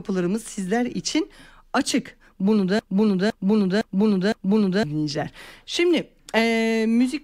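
A speech clip with a broken-record loop from 2.79 s to 4.83 s: a 0.51 s fragment repeats exactly four times back to back, and the speech that belonged in that span is lost. The likely cause is a stalled player, encoder or stream replaying its last buffer.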